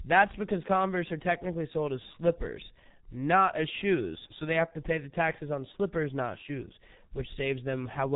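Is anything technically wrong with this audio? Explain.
Yes. Throughout the speech there is heavy G.723.1 codec damage. Nothing above 3.8 kHz survives, so the sound is dull and boxy. The codec rebuilds speech from a coarse vocal-tract model that is refreshed only every 30 ms frame, which fits a rate near 6 kbit/s. That slow model leaves a hoarse, buzzy texture and smeared consonants. A simple low-pass filter would muffle the sound but keep it clean. Here the roughness and blurring are the codec's signature.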